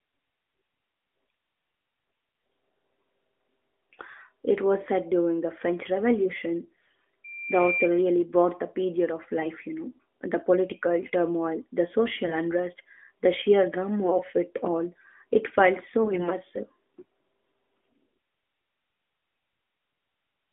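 Short bursts of AMR bit errors occur at 2.32 to 2.42 s and 6.64 to 6.93 s. Corrupted low-priority bits in the frames misplace the excitation pulses and skew the fine pitch, gain and spectral values, so the speech keeps its pitch and level but turns briefly hoarse, scratchy and gargly.

From 7.24 to 7.91 s, a loudspeaker feedback squeal appears at 2.4 kHz. The microphone-to-speaker loop exceeds unity gain there, and the tone swells over about half a second to roughly the speech level before ending just ahead of "really brought the period".

The same gargly roughness returns at 9.38 to 9.48 s, between "brought the period of" and "you know the political". It recurs at 12.26 to 12.38 s, at 14.04 to 14.22 s between "the sheer" and "it all", and at 16.04 to 16.31 s.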